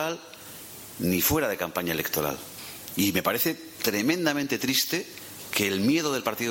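From start to finish, a block size mismatch (padded) fills each block's tail with zeros. This gives a 43.1 Hz buzz, which fits 1024-sample blocks. Speed barely changes.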